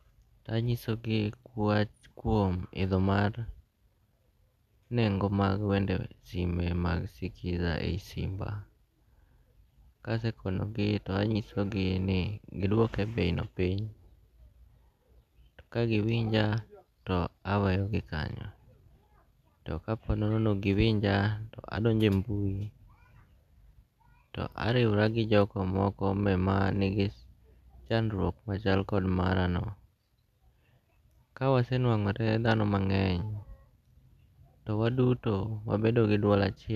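Nothing in the speech stood out as a problem on listening.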